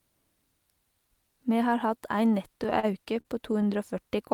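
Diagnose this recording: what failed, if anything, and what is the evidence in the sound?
The network delivered packets late or too slowly, so the receiver's jitter buffer kept running dry between 2.57 and 3.68 s. The result is repeated stalls (stutter): ten short holds, none longer than 40 ms, bridged by extending the preceding sound, about 145 ms in all. Nothing is lost, but the speech drags.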